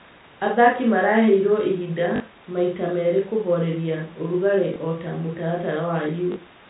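Packets were lost and the receiver replayed the last one in their place, an instance of packet loss with last packet repeated, at 2.16–2.20 s (40 ms), 4.74–4.76 s (20 ms) and 6.32–6.36 s (40 ms). The two-packet repeats at 2.16 s and 6.32 s buzz briefly near 50 Hz, a short robotic stutter, and the single repeat at 4.74 s is a small blip, all over the G.711 telephone-band sound.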